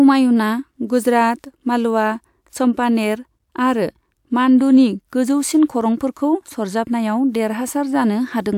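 A short speech recording, with no technical fault to be heard anywhere in it. Nothing in the audio calls for a time or a cause to be noted.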